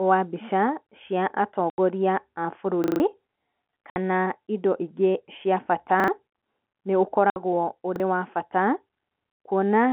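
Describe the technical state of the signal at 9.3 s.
At 9.32 s two consecutive packets failed to arrive, and the receiver had nothing to put in their place, so it played silence: packet loss filled with silence. The gap runs to 9.36 s, a 40 ms hole consistent with two 20 ms packets. The speech cuts out abruptly and returns just as abruptly, with hard edges on either side of the dropout, within the narrow telephone band of the G.711 line.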